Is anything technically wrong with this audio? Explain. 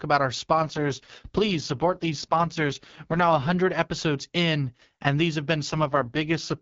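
Yes. The speech has two AMR rate drops, from 0.53 to 3.52 s and from 5.69 s to the end. A weak radio link pushed the AMR-WB codec to a lower rate, spending bits on error protection instead of the voice. The roughness fits a drop from 12.65 to about 6.6 kbit/s. The bandwidth holds and nothing cuts out, but the voice turns raspy and synthetic, then clears again at the 12.65 kbit/s HD Voice rate between the two drops.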